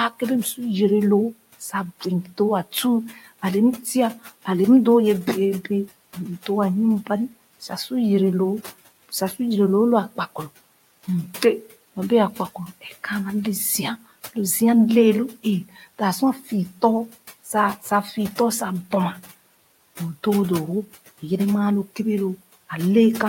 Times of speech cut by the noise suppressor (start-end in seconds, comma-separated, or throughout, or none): 3.10-3.21, 15.69-16.00, 16.40-16.52